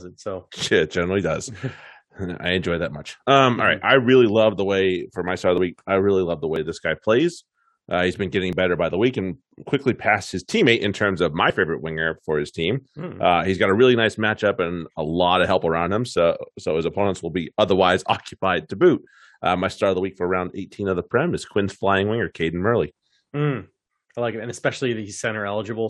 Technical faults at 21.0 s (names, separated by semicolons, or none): none